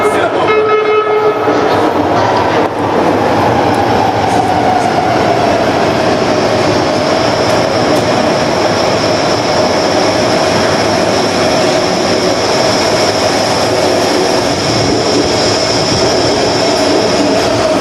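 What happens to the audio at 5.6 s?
At 5.6 s the audio is in the grip of gain pumping, which runs through the whole clip rather than starting there. The level swings by roughly 10 dB. Loud and soft parts sit closer together than they should, so the sound feels squashed and breathing. The likely cause is gain set far too high, with a fast limiter or compressor clamping down on each peak.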